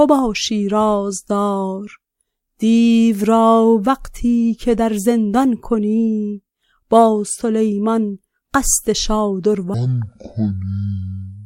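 From 9.74 s to the end at 11.46 s, a section at the wrong speed plays at 0.52 times its proper rate, likely because that stretch was fitted to the wrong clock. The audio drops by roughly ten semitones and drags noticeably. What separates this from a pitch shift or a time-stretch is that both move together, in lockstep: the sound becomes deeper and slower at the same moment, rather than one changing while the other holds.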